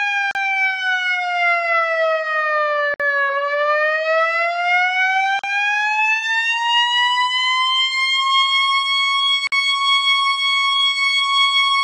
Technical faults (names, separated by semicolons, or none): gap at a join of encoded pieces